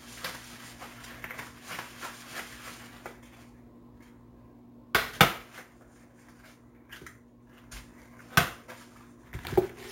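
From start to finish a bright, metallic fizz rides on top of the sound, rising and falling with its level, and its lowest band sits between 8 and 16 kHz at about 14 dB below the signal. This is imaging from sample-and-hold upsampling. The audio appears to have been raised from a 16 kHz rate to 44.1 kHz by repeating each sample without a smoothing filter, so mirrored copies of the spectrum fold upward and run in the opposite direction to any pitch movement.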